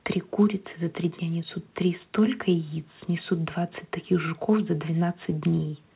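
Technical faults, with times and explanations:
No technical faults are audible.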